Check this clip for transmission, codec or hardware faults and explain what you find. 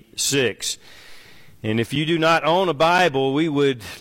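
Two brief dropouts point to a gap between stream segments, at 1.95 s and 2.98 s. Timestamps on adjacent one-second segments fail to meet, so the player pads each gap with silence: a hard-edged hole of about 6 ms, one second apart, with no audio actually missing.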